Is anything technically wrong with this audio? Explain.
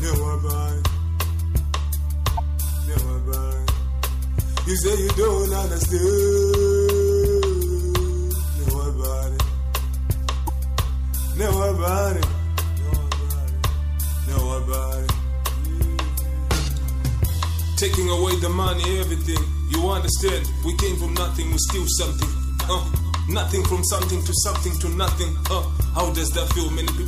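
Yes, there are two brief glitches, at 2.37 to 2.40 s and 10.46 to 10.49 s, each lasting about 30 ms. At both, the audio skips ahead with a short garbled moment. That's likely a broken MP3 bit reservoir: a frame went missing, so the next one reached back for borrowed bytes and decoded someone else's data instead. Each glitch is roughly one 26 ms MP3 frame long, which fits that explanation.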